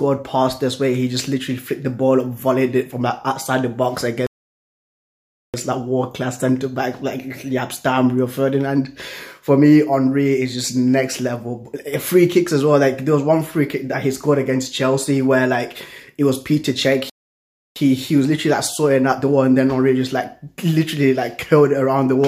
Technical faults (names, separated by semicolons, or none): playback stall